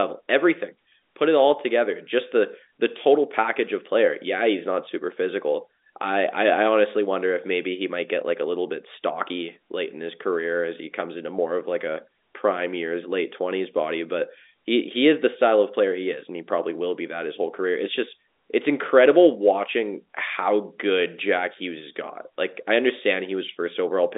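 No technical faults are audible in this telephone speech.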